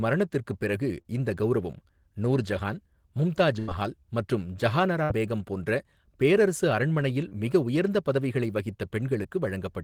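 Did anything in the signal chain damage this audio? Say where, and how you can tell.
Yes, the network stage dropped single packets. Short concealed packet loss at 1.01, 7.29 and 9.23 s leaves brief smears or wobbles where the decoder extended the previous sound.

A burst of packet loss at 3.6 s, after "இந்த கவுரவம் நூர்ஜஹான் மும்தாஜ்", lost about 80 ms, and another at 5.04 s, after "மும்தாஜ் மஹால் மற்றும் ஜஹானாரா", lost about 60 ms. Each is heard as a held buzz or fading hiss, then a skip ahead.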